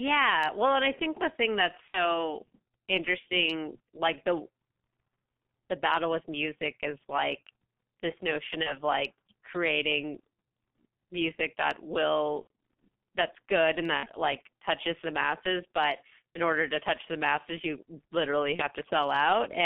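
Throughout the speech, the G.723.1 codec is squeezing the signal to about 6.3 kbit/s in 30 ms frames, on a line that carries only about 200 Hz to 3.5 kHz. Its voice model updates slowly and coarsely, so the damage is heavy: the voice is muffled and hoarse, consonants smear together, and everything above the band is gone.

Five times, VoIP packet loss concealed by the speech codec interrupts it. The decoder, missing packets, keeps extending its last pitch and filter at falling gain, and because each frame depends on the one before, the voice stays weak and distorted as it recovers. From 1.89 to 2.23 s the sound stretches and fades, which fits about 60 ms of lost audio. The same happens from 8.63 to 8.77 s, pointing to one lost frame. After "music that", from 12.41 to 12.47 s, the worst gap fits roughly 90 ms missing. Between "that's good and" and "like touches the masses", at 13.97 to 14.09 s, a shorter stretched, fading sound appears, and after "the masses you literally", at 18.56 to 18.68 s, a brief one follows.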